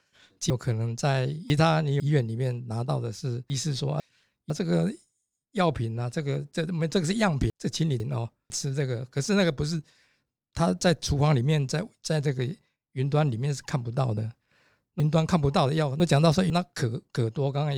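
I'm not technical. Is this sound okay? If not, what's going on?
No, not quite. The speech has four spots where pieces of the audio play in the wrong order, a fault called chunks out of order. Around 0.5 to 2.0 s and again from 15.0 to 16.5 s, a half-second piece turns up two pieces too late. At 3.5 to 4.5 s and 7.5 to 8.5 s it's one piece late. Nothing goes missing, but each spot sounds jumbled.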